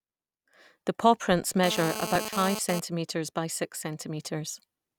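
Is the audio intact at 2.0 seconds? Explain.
No. GSM phone buzz runs from 1.64 to 2.80 s, ending just before "by six". A nearby phone's data bursts, 217 per second, get rectified by the audio circuit, producing a hard, raspy, harmonic-rich 217 Hz buzz, intermittent, about 7 dB below the speech.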